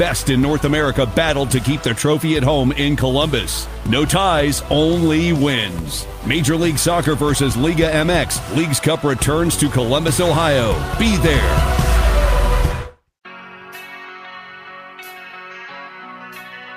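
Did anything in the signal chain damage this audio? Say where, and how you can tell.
No, nothing in the signal chain damaged this audio.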